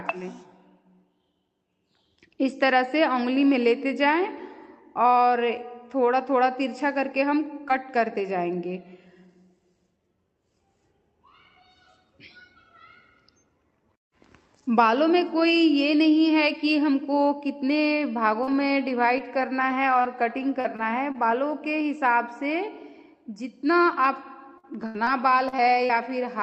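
The audio comes through an Opus call path whose spectrum stops at 8 kHz. Three packets were lost but rebuilt from error correction at 7.11, 7.45 and 7.69 s. Each leaves a 20 ms rougher, noisier patch, seen as faint smudged columns on a spectrogram. From 7.68 to 7.71 s, a short concealed packet loss continues the previous sound to bridge a 20 ms hole. It shows as a brief smear. Between 18.43 and 21.32 s, about seven scattered short gaps, the longest around 40 ms, cause ticks and hiccups. These appear as thin, repeated-looking slivers spread across the spectrogram. From 24.04 to 26.11 s, repeated packet loss in six gaps, up to 81 ms, gives choppy sound with pieces missing. The spectrogram shows smeared, stretched harmonics and the waveform shows broken envelopes.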